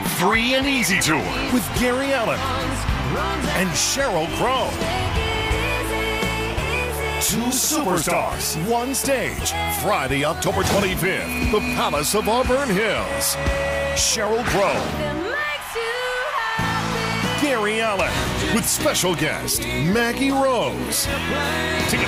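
At 8.27 s and 14.27 s, overlap between 6-second stream segments cuts about 13 ms and 15 ms of sound, causing an abrupt waveform jump heard as a tiny skip.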